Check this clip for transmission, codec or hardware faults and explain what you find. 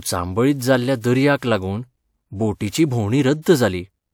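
Two pre-echo events are audible, the only faults present. Pre-echo appears from 1.38 to 1.42 s and again from 3.42 to 3.46 s, spreading about 47 ms and 42 ms ahead of sharp speech onsets. The transform codec distributes quantisation noise across each whole block, so noise scaled for the loud attack also fills the quiet stretch just before it. Each onset is therefore preceded by a brief hiss and sounds smeared rather than crisp.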